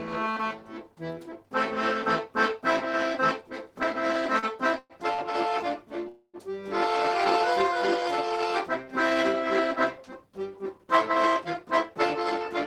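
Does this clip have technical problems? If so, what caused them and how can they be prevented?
Yes. Around 4.39 to 4.46 s and again at 5.14 to 5.21 s, the sound briefly hangs on itself, a held sliver with a slight buzz or dip, then carries on without losing anything. These are short stalls from a late packet: a packet missed its slot, the jitter buffer ran dry, and the receiver stretched the last sound for about 36 ms and 46 ms until it turned up, pushing everything after it later by that amount. A slightly deeper jitter buffer, or adaptive buffering that grows when arrival times wobble, would absorb delays this small.

The longer interruptions at 4.79 to 4.93 s and 6.08 to 6.37 s are call audio freezes. The sound smears into a fading buzz or hiss, then drops out completely for about 30 ms in the first and 60 ms in the second before resuming exactly where it stopped. Nothing is lost, but about 111 ms and 254 ms of extra time are inserted. 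The likely cause is packets held up in the network long enough to empty the jitter buffer completely. Preventing this means steadier delivery: prioritising voice traffic with QoS, avoiding congested or unstable links, and letting the buffer adapt to bursts of delay.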